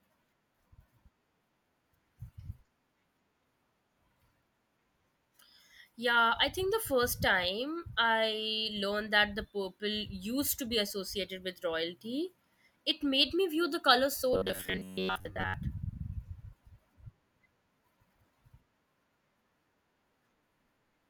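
From 14.34 to 15.54 s the speech turns into a robotic sound from repeated short buffers. The voice becomes a stiff, metallic buzz at 93.8 Hz. It still tracks the shape of the words loosely. The likely cause is new audio arriving too seldom. The software then fills the gaps by replaying a slice of about 11 ms over and over. Most of the real audio in that stretch is skipped. The repeat rate sets the fixed pitch.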